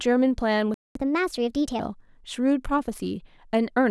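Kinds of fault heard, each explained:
Playback stall: From 0.74 s to 0.95 s the speech drops out entirely for about 0.21 s, breaking off mid-flow rather than at a natural pause. The likely cause is the player briefly running short of buffered data, or its output thread being held up, so nothing reached the output until it recovered.
Catch-up at higher speed: From 0.95 s to 1.80 s, right after the gap, the speech runs at 1.25 times normal speed and its pitch rises by roughly four semitones, giving a hurried, raised quality. The player is working through its backlog by resampling it faster, which raises tempo and pitch together, until the 0.21 s lost in the stall is recovered. At 1.80 s both return to normal.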